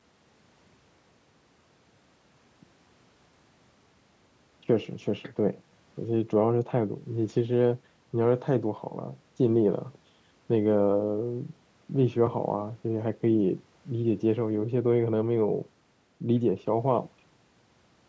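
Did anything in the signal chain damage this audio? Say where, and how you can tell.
No, nothing along the way has hurt this speech: it has been through a call's microphone processing, which trims the deepest bass and carries nothing above 8 kHz, and that's just how that path normally sounds.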